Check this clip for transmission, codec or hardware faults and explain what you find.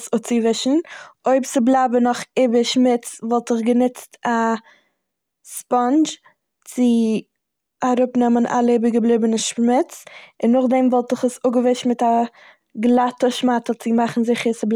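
There's one fault worth flagging: an electrical switching spike at 5.57 s in the speech. It's a sharp snap, over in well under a hundredth of a second, sitting on top of the talking and peaking somewhere around -20 dBFS. The likely cause is a nearby switch, motor or static discharge throwing a brief arc that the audio line picked up, so the click comes from outside the recording rather than from anything in the signal itself.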